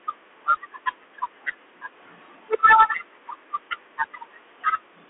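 Throughout, the speech sounds thin and boxed, cut off above 3.9 kHz, with scratchy s sounds and granular hiss from the Bluetooth CVSD headset codec's one-bit delta coding.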